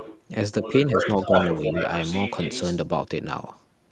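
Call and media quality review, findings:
Other side's voice leaking through, 0.00–0.21 s faint, then 0.63–2.77 s about as loud as the talker. Likely the echo canceller missing loudspeaker pickup at the mic.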